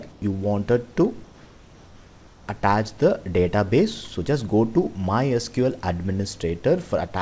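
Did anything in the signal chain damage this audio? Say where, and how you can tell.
Yes. Comfort noise in place of the background, at the call-processing stage: from 0.12 to 0.22 s and 1.24 to 2.48 s, steady, featureless hiss about 2 dB quieter replaces the real background, likely discontinuous transmission. A spectrogram shows smooth, textureless noise there.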